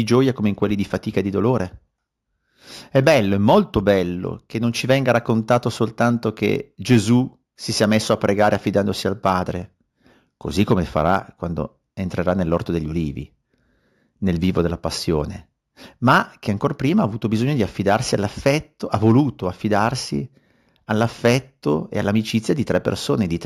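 Throughout, the sample rate was raised by joining neighbouring samples with straight lines, a pattern that fits a 16 kHz source converted to 48 kHz. This imaging from linear upsampling dulls the top of the band and leaves a faint mirrored copy between 8 and 16 kHz, about 30 dB down, heard as a light metallic shimmer.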